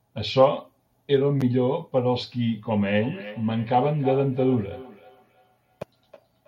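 From 2.99 s to the end at 6.47 s there's feedback echo between two devices: a second device in the room replays the speech, and the first device's mic picks it up again. Repeats come roughly every third of a second, thinner and ringier, peaking about 15 dB under the voice.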